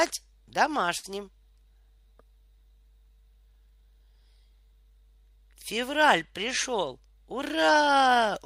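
At 0.97 s the speech breaks up in a burst of packet loss lasting until about 1.06 s. Several consecutive packets never arrived in time, so the receiver concealed the gap by extending the last decoded sound for about 59 ms while steadily attenuating it, giving a brief held, fading tail instead of new speech. Playback then picks up later in the utterance, with about 60 ms of the original speech skipped entirely.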